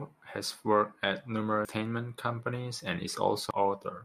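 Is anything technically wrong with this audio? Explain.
Yes. Damaged data in a compressed stream at 1.65 s, just after "has worked at", and at 3.51 s: corrupted bytes desync the decoder, producing brief blips.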